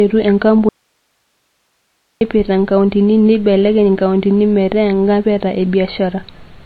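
From the start the speech carries MP3 compression damage, plainly audible throughout: nothing remains above about 4.6 kHz, so the top end is dull and sibilants are blunted. Weak spectral detail flickers between frames, giving a watery, swirly texture and smeared consonant onsets. This is likely an encoder starved of bits, and the damage fits a low bitrate of roughly 25 kbps, where the encoder must discard treble and quiet components to stay within budget.

At 0.69 s the speech cuts off abruptly in an audio dropout to a faint residue, lasting about 1.52 s until it returns at 2.21 s just before "inkauntini neibelekenya nkauntini". The gap is not silent. It holds only hiss, something like 50 dB below the speech level. The hard edges at both ends and the live noise floor point to the wanted signal being likely lost upstream while the rest of the path stayed up.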